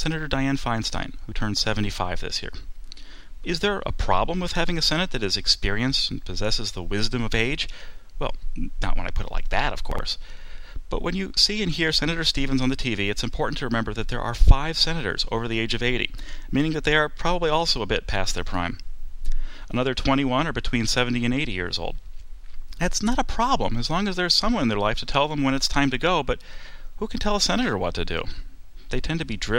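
At about 9.92 s, running to 9.99 s, there's a brief chunks-out-of-order glitch. One chunk of roughly 23 ms shows up two chunks late, so it plays after the two that should have followed it. Nothing's missing, but that 70 ms stretch comes out shuffled, and the three hard joins where the pieces butt together give it a quick jumbled stutter.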